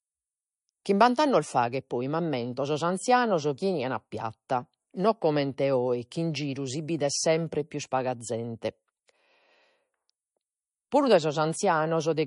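From start to finish the speech sits under a hard ceiling: nothing comes through above about 10.6 kHz, and the top end has that thin, swirly low-bitrate MP3 texture. It's likely a case of low-bitrate audio saved at a high bitrate. The cut-off and smearing fit an MP3 at around 40 kbit/s that was then re-encoded at something like 192 kbit/s. The bigger second pass couldn't bring back what the first one threw away, so the damage stays baked in.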